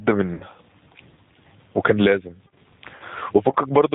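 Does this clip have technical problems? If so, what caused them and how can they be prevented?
Yes. The speech has three separate problems.

Throughout the clip, loud and quiet passages sit unnaturally close together, and the level swings by about 20 dB. This is gain pumping. It is likely caused by input gain set far too high, so that a fast limiter or compressor keeps clamping down on every peak and releasing in the pauses. To prevent it, lower the microphone or interface gain so that peaks land well below the limiter's threshold.

The whole clip also sounds band-limited, with nothing above about 4 kHz. The speech has a rough, slightly synthetic edge, and anything that isn't voice warbles. That plainly audible damage is the signature of the G.729 codec, which fits an 8 kbit/s G.729A stream. The codec discards the waveform and resynthesises speech from a vocal-tract filter, a pitch predictor and a handful of pulses per 5 ms subframe. 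To prevent this, use a wideband codec such as Opus or G.722 where the network allows it.

At 0.34–0.44 s and again at 2.96–3.03 s, the speech is stretched into sound that fades out, and it stays weak and distorted for a short time after each event. This is VoIP packet loss concealed by the speech codec. About 60 ms and 40 ms of audio went missing, which fits three and then two lost 20 ms packets. The decoder filled each gap by repeating its last pitch and filter settings at falling gain, and because every frame depends on the previous one, the damage carries over after normal packets resume. To prevent it, improve the network path, or add forward error correction and a better jitter buffer.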